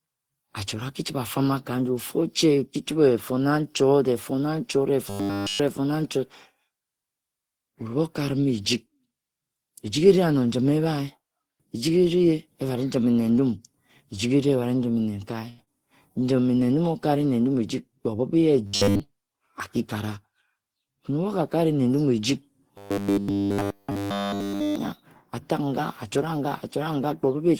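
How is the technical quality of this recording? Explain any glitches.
The recording has several network-playback glitches clustered between 5 and 25 seconds.

From 5.10 to 5.60 s, 18.67 to 19.00 s, and 22.78 to 24.76 s there is robotic sound from repeated short buffers. Essentially all of the audio there turns into a rigid 100 Hz buzz, likely from a 10 ms buffer replayed. Unlike a stall, it persists.

From 15.49 to 15.61 s a short stall from a late packet holds one sound for 84 ms. Nothing is lost, because playback resumes exactly where it paused.

From 15.64 to 15.70 s a short concealed packet loss leaves 60 ms missing, bridged by 28 ms of continuation. It sounds like a smear, and unlike the stall, audio is actually skipped.

From 16.19 to 16.44 s a jitter buffer slow-down plays the speech at 87% speed, adding 39 ms. The sound is drawn out at unchanged pitch, unlike the robotic buzz.

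From 17.54 to 18.19 s a jitter buffer speed-up runs the speech at 111% speed, trimming about 100 ms. It sounds hurried at the same pitch, the mirror of the slow-down.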